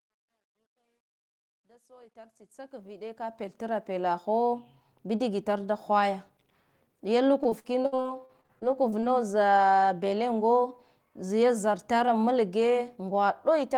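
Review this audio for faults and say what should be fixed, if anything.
Truncation distortion on the fade runs from 0.0 to 4.05 s, during the fade-in. A volume stage without dither leaves the quiet opening as coarse steps, consistent with roughly 11-bit resolution. It is gritty, worst from 0.0 to 2.21 s. Keep full resolution through gain stages and add dither when reducing bit depth.

Repeated packet loss (robotic sound) occurs from 7.43 to 9.04 s. Fifteen dropouts, the longest 61 ms, are patched by extending preceding sound, so about a quarter of that stretch is concealed. The result is choppy. Use a larger jitter buffer or error correction on the transmission link.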